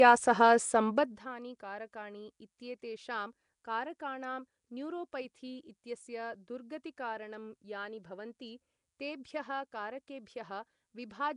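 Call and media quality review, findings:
Rough, hissy halo and smeared, underwater quality throughout; nothing above 10.7 kHz. Likely Nellymoser compression: fixed-rate block coding starves weak bands and fills them with noise, and the damage fits a stream near 44 kbps.

Zipper noise, 0.90 to 1.26 s: fast ticking riding on a level drop of around 20 dB. Gain stage applying the change in unsmoothed 1 dB jumps, about a hundred per second, each jump a small click.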